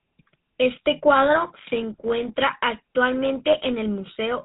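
From start to finish the speech carries the plainly audible signature of the GSM full-rate codec, at a rate that fits 13 kbps. The vocal tract is modelled and excited by a sparse pulse train, producing a buzzy, gravelly roughness, and everything above 4 kHz is missing.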